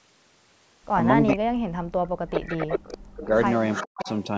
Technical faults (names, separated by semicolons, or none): echo leak; speech suppressed in double talk